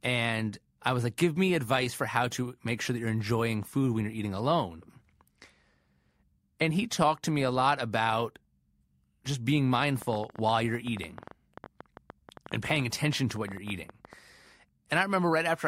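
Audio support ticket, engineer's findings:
Train of clicks, 10.02 to 14.14 s: around forty similar pops, about 10 per second, uneven spacing, peaking roughly 5 dB over the speech. Likely nearby-equipment interference or a faulty connection or power supply.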